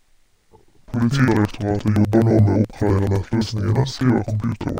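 All the way through, interleaved audio read as planar: 85 ms blocks split into halves, so the speech sounds an octave low, doubled and choppy at about 11.7 Hz.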